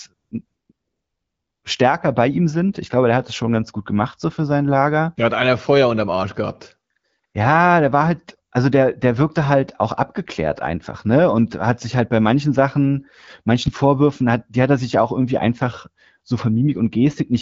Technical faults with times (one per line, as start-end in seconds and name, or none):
0.13-1.63 AMR comfort noise
6.93-7.33 AMR comfort noise